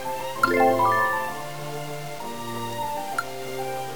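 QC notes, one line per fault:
Throughout, low bit depth without dither: a grainy, gritty distortion rides on the sound and shifts with it, roughest in the quietest stretches, where low-level detail breaks up into a sputtering buzz or drops out toward silence. The error sits only about 15 dB below the signal. The likely cause is the audio being cut down to around 6 bits by truncation with no dither, so the rounding error follows the waveform instead of spreading out as steady hiss.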